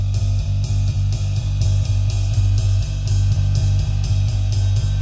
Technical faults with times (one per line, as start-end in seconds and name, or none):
none